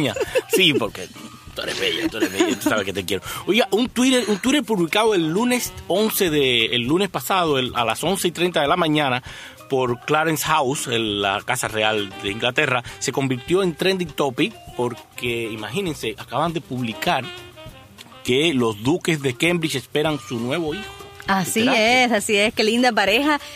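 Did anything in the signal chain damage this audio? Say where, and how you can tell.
No, nothing along the chain seems to have done this audio any harm, so there's no stage to point at and nothing to pin to a time.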